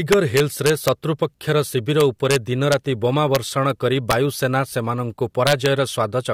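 Integer overflow hits the loud speech peaks from 0.12 to 0.88 s, 2.00 to 2.36 s, at 2.72 s and at 3.35 s. Peaks only about 1 to 2 dB over the limit wrap to the opposite sign, so you get harsh cracks, far sharper than clipping. At 3.70 s, just before "କରି ବାୟୁସେନା ସେମାନଙ୍କୁ", an electrical switching spike drops a sharp snap on top, likely from a nearby switch arcing. The overflow cracks come back from 4.11 to 4.13 s and from 5.47 to 5.66 s, where the overdrive reaches about 3 dB.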